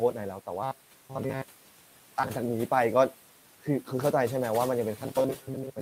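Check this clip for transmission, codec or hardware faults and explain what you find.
Two faults are audible: noise-suppressor processing across the whole clip, and two stretches of robotic sound from repeated short buffers.

Noise suppressor artifacts run throughout. The suppressor pulls down bands it judges to be steady noise, by about 12 dB, frame by frame. The room noise, sitting about 19 dB below the speech, dips in the gaps and swells back under speech.

Robotic sound from repeated short buffers appears from 0.63 to 2.29 s and again from 4.98 s to the end. The likely cause is audio arriving too rarely, with the gaps filled by looping a slice of roughly 7.5 ms while most of the real signal is skipped. The loop imposes a rigid 133 Hz buzz, turning the speech metallic while it still loosely tracks the original.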